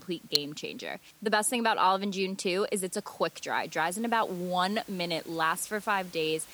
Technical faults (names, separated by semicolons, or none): electrical switching spike